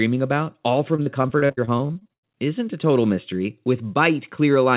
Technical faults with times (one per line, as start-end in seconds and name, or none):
0.96-2.25 repeated packet loss (robotic sound)